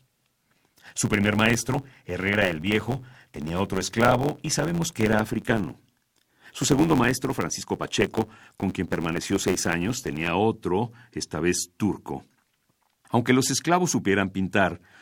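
A block size mismatch (truncated) runs from 0.0 to 10.31 s, ending just before "otro esta vez turco". Each block loses its tail, which fits 512-sample blocks read short, giving a 91.9 Hz buzz and speech running 1.07 times fast at near-normal pitch.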